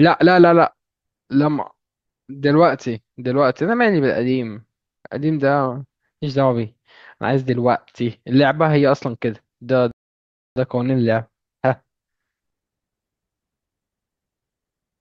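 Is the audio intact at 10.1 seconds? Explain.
No. From 9.91 to 10.56 s the speech halts in a rebuffering stall: playback ran out of downloaded audio and paused until more data arrived. The result is silence, then a resumption exactly where it stopped, adding 0.65 s without losing any speech.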